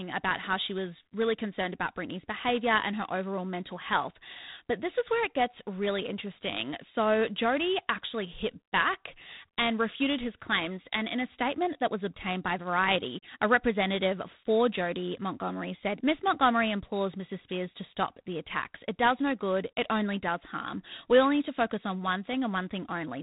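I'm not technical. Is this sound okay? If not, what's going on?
No. The speech was squeezed through G.726 ADPCM, a telephone codec that stores each sample as a rough guess of how it differs from the previous ones. Here it ran at a low-quality setting with too few bits, so every guess is coarse. You hear a harsh, rasping hiss riding on the speech from start to finish, louder when the speech is louder. Nothing above about 3.8 kHz survives, so everything sounds thin and phone-like.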